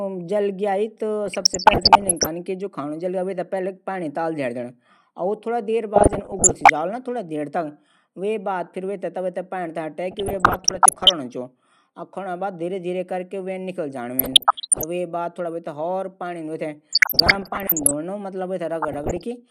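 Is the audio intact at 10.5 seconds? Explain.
No. At 10.5 seconds the speech is caught in a burst of DAB burbling that runs from 10.11 to 11.11 s. Weak reception lets bit errors slip past the error correction into the MP2 audio data, here at a rate of around one percent. Corrupted samples put short blips of noise into single sub-bands, and corrupted scale factors make sub-bands leap in level for up to a frame. The result is a burbling disturbance laid over the speech for about a second.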